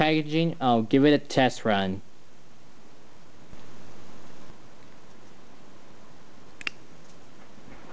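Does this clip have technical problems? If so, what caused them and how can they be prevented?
No, the clip has no technical problems, so there is nothing to prevent.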